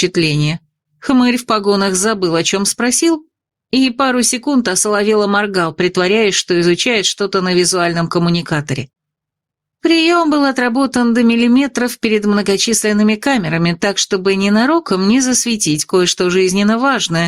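Gain pumping runs through the whole clip: the level swings something like 10 dB, so everything ends up squashed together. Likely cause is input gain set way too hot, with a fast limiter clamping down.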